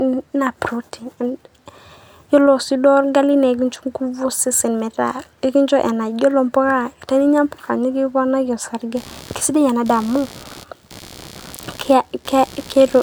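From 8.96 s through to the end of the speech there's computer activity noise: a buzzy, chirping pulse at around 70 Hz, sitting roughly 20 dB below the voice. What's happening is that the machine's processor or graphics load is shifting, and that current drags on the ground the audio circuit shares, so the interference rises and falls with the computer's workload rather than following anything in the speech itself.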